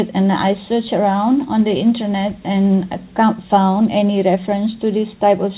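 No technical faults can be heard in this audio.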